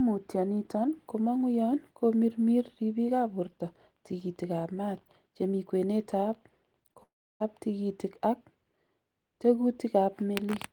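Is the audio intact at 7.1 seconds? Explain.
No. From 7.03 to 7.42 s the speech breaks up in what is likely a long network dropout: about 0.38 s of audio never arrives. The receiver stretches the last sound into a buzz or hiss that fades, leaving near-silence for roughly 0.32 s, and speech resumes at "tikitik ak" with the lost stretch simply gone. A brief concealed packet loss would be a short warble or click. This gap is long enough that the fill dies away into silence.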